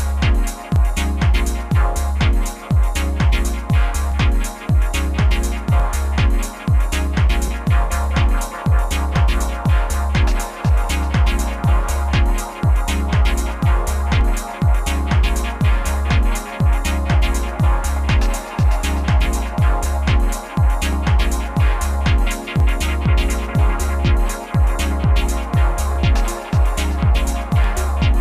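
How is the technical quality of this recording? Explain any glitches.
A regular click or pop recurs every 1.68 s from 0.76 s to 27.64 s, about fifteen in all. These are likely clock drift buffer slips: two clocks mismatched by roughly a tenth of a percent, so a block of some tens of samples is periodically dropped or repeated.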